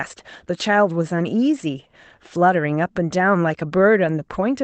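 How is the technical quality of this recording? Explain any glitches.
No glitches can be heard anywhere in the speech. It has gone through a call codec that works as intended, with the top end limited to about 8 kHz, as fits a low-bitrate Opus setting for calls.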